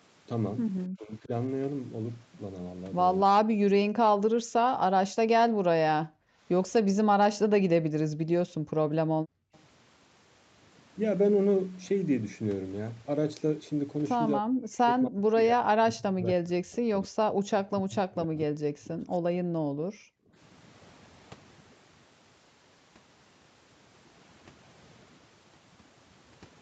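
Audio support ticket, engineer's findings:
Overdone noise removal, whole clip. Noise suppressor set far too aggressive, pulling individual frequency bands down or out whenever they sit near its noise estimate, taking low-level speech detail with them. Result: background drops and breaks up into twinkling musical specks. Audible top end stops around 8 kHz, consistent with the wideband call path.

Speech suppressed in double talk, likely from the echo canceller failing to separate near-end talker from loudspeaker echo during overlap and attenuating both. Dips at 0.95–1.31 s (about 20 dB), 3.26–3.93 s (about 40 dB), 8.09–8.17 s (about 25 dB), and a long stretch 14.39–19.17 s (about 30 dB, roughly 4 s affected). Voice sags, dulls or drops out in pieces.

Background gated by the echo canceller. Canceller clamping the microphone hard while far-end audio plays from the loudspeaker, then releasing. 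Room tone dips or vanishes at 4.33–6.42 s (about 40 dB, roughly 1 s total), 8.49–9.53 s (about 33 dB, under 1 s total) and 19.4–20.34 s (about 40 dB). Ambience pumps out and back in, leaving audible holes.

Echo leak, 9.54–9.59 s. Likely residual loudspeaker pickup passing through the far-end canceller and returned down the line, 267 ms behind the original. Very faint, about 40 dB under the speech. Heard as a brief, delayed scrap of the voice right after the gated section ends.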